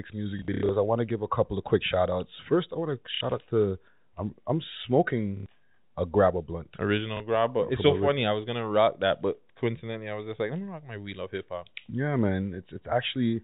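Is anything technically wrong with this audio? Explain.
Yes. Packet loss with last packet repeated occurs at 0.39–0.69 s, 3.15–3.21 s, 5.37–5.46 s and 7.17–7.20 s. Missing packets are replaced by replaying the previous one, which fits 30 ms packets. Runs of repeats buzz near 33 Hz as a brief robotic stutter.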